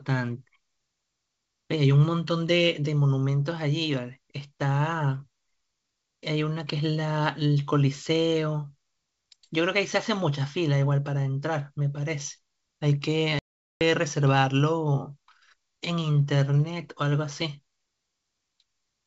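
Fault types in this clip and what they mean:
Packet loss on an ADPCM call: at 13.39 s the speech drops into a hard-edged silent gap lasting about 420 ms, until 13.82 s, which fits a run of roughly forty lost packets. When sound resumes it comes back with brief, slight distortion before settling. The gap was filled with silence, and the decoder's adaptive predictor and step size no longer matched the sender's, so the clean G.722 wideband audio briefly stumbles.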